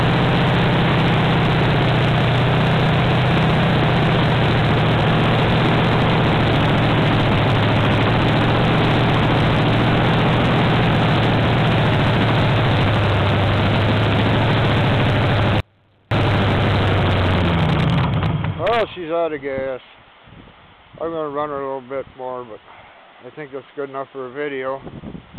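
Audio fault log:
15.60–16.11 s, audio dropout to a faint residue. The sound cuts out abruptly for about 0.51 s, then returns just as suddenly. The gap is not silent. A faint trace of the sound remains, roughly 40 dB below its normal level. The hard edges rule out a pause or a fade. The likely cause is a brief loss of the wanted signal while the path after the break stayed live, letting only a weak leak through.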